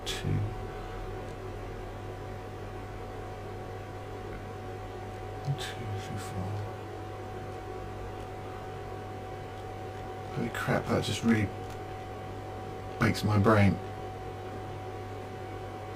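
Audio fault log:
throughout, channel delay (comb filtering): one channel runs about 20 ms behind the other, and the two are summed to mono. Content common to both cancels at evenly spaced frequencies, starting near 20 Hz. At a delay this long the sound comes across as rough and slightly doubled rather than simply hollow. On a spectrogram, fine horizontal striping of closely spaced notches runs the full length. On the waveform, each sharp onset is echoed by a copy about 20 ms later.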